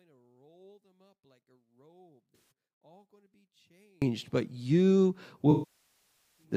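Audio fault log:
0.0–4.02 s, one channel inverted: the mono sum drops about 40 dB until "but you", likely from one channel's reversed polarity cancelling the centred speech; the waveform collapses to a thin residue.
2.36–2.51 s, AAC frame loss with concealment: a 150 ms smeared, noisy patch where the decoder repeated the last spectrum with scrambled phase; the spectrogram shows a blurred, flat block.
5.51–6.44 s, AAC frame loss with concealment: after "but you", roughly 0.87 s of loss, consistent with about 41 frames, decays toward silence then fades back; the waveform tapers and the spectrogram empties.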